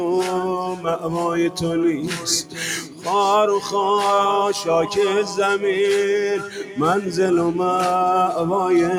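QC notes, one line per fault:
Throughout: noise suppressor applied to music or sounds. A speech-tuned suppressor treats sustained content as noise, so level swings by about 10 dB and the sound pumps and thins.
0.65–1.1 s, 2.03–2.26 s, 2.43–2.59 s, 2.78–3.07 s, 6.39–6.77 s: sound cut by the noise suppressor. Held or decaying passages sink by about 6 to 8 dB and tails cut short.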